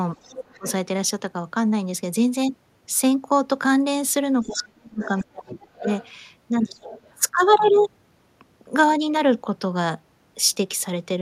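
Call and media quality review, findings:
Speech suppressed in double talk: talker ducks at 0.16–0.66 s (deep, around 35 dB), 4.43–5.87 s (around 40 dB, about a second lost), 6.82–6.89 s (shallow). Likely echo canceller attenuating both talkers during overlap.

Other side's voice leaking through: faint far-end voice at 0.22–0.72, 4.41–4.63, 5.02–6.09 and 6.82–7.15 s, roughly 15 to 20 dB under the talker. Likely loudspeaker echo not fully cancelled from the microphone path.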